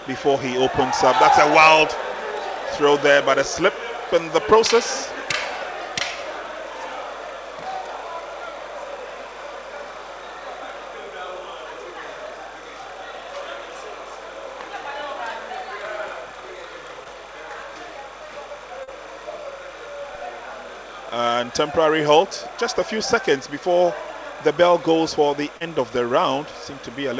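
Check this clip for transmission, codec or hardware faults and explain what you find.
Two faults are present: a continuous timecode bleed and three brief concealed packet losses. The audio also travelled over a call link whose bandwidth stops at 8 kHz, consistent with a wideband codec such as G.722.

Timecode bleed runs for the whole clip. Linear timecode from a neighbouring track or cable has leaked into the audio. Its square-wave code flips between tones near 1 and 2 kHz at a 30 frames-per-second rate. It sits about 20 dB below the wanted sound and is heard as a steady, chirping warble that never lets up.

Short concealed packet loss occurs at 17.04–17.07 s, 18.83–18.89 s and 25.57–25.62 s. At these points 20 ms, 40 ms and 40 ms of the stream failed to reach the decoder in time. The receiver bridged each hole by extending the preceding sound, then cross-faded back into real audio. The result is a momentary smear or wobble, slightly longer at the second and third points. 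A short transient falling in those gaps can disappear.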